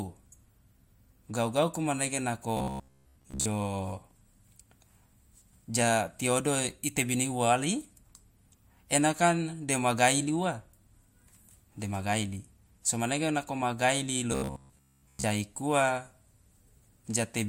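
From 2.57 to 3.46 s, after "gauku manege", and from 14.32 to 15.24 s, after "manege nako ma gaili", robotic sound from repeated short buffers turns the speech into a rigid 66.8 Hz buzz. It is likely caused by a 15 ms stretch looping while most real audio is skipped. A spectrogram shows fixed, evenly spaced harmonics, and the waveform shows identical repeating cycles.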